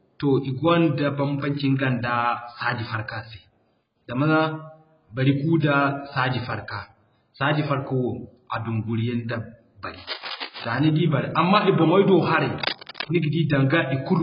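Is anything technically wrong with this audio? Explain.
Yes. AAC compression runs throughout: the speech is heavily damaged and dull, with nothing above 5.3 kHz. This fits a likely AAC-LC encode at a very low bitrate near 12 kbps, which cuts the top band and smears what remains.

Cable scratch noise occurs from 9.97 to 10.65 s and from 12.58 to 13.16 s. Rapid contact-resistance changes, likely from a disturbed connector, add scratchy bursts about 10 dB, then about 5 dB, below the speech.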